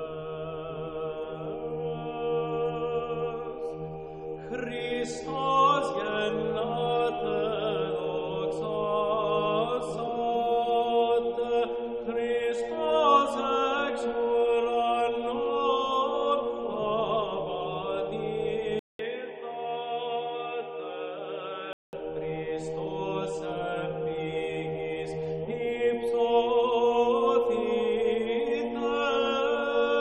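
Input switched to a poorer device, likely, from 18.79 to 21.93 s: after a 200 ms silence the sound turns dull, cut off above 3.8 kHz, a little quieter, with faint new background noise.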